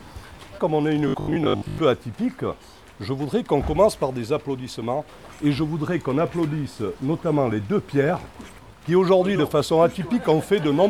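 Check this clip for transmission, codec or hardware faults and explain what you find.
One fault is present: robotic sound from repeated short buffers, from 1.08 to 1.78 s. Across that stretch the audio turns into a rigid, metallic buzz pitched at 50 Hz that only loosely tracks the underlying sound. The likely cause is audio arriving too slowly, so playback loops the most recent fragment of about 20 ms to fill the gaps, which fits the 50 Hz buzz. Most of the audio in that window is skipped.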